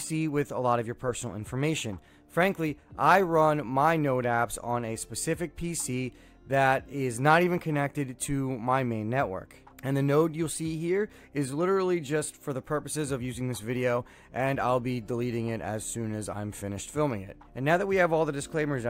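No technical faults can be heard at any point, so there is nothing to describe in time order.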